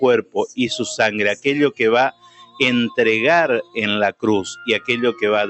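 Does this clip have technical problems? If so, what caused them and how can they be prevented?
Yes. A noise suppressor designed for speech was left running on this audio, so it treats sustained tones, ambience and reverb as noise. Throughout the clip, levels swing by around 10 dB as attacks pass through and held sound and tails get pulled down, giving a pumping, thinned-out result. Disable the noise suppressor, or switch to a music mode, whenever non-speech material is sent.

From 2.11 to 2.6 s, the noise suppressor treated the sound as noise and cut it harder, by as much as about 17 dB. For roughly half a second the sustained portion sinks and its decay is cut short. Turning off speech-oriented suppression for this kind of source prevents the dip.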